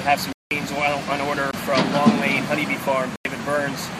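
At 0.33 to 0.51 s the audio drops into a block of digital silence lasting about 186 ms, which fits an 8192-sample buffer left unfilled. A shorter gap follows at 1.51 to 1.53 s, about 22 ms, then another at 3.16 to 3.25 s, about 93 ms, consistent with 4096 samples. Each cut to silence and back is abrupt. The longest is a clear hole, the shortest close to a pop.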